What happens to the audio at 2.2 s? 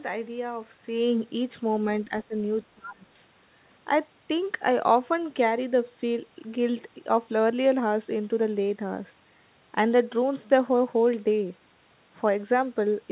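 Around 2.2 s the speech sinks sharply, dropping by roughly 15 dB and thinning out in patches between 2.05 and 2.36 s, with about a fifth of a second affected in total. This is likely speech suppressed in double talk: with both ends talking at once, the echo canceller could not tell the local talker from the loudspeaker's echo and turned the outgoing signal down, taking the wanted speech with it.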